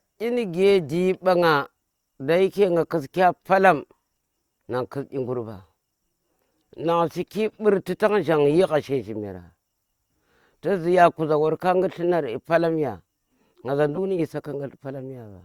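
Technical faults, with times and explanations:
13.95–13.98 s: corrupt frame decoded. A single damaged compressed frame was played as if valid, so misread codes and gains put energy at wrong frequencies, giving a brief burst of error energy of about -20 dBFS. A spectrogram shows a thin vertical smear breaking the speech harmonics.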